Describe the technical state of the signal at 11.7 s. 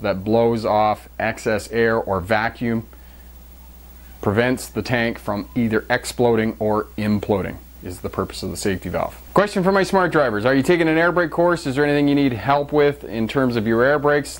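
At 11.7 s the signal is intact, with no dropout, distortion, clipping or other fault at that point.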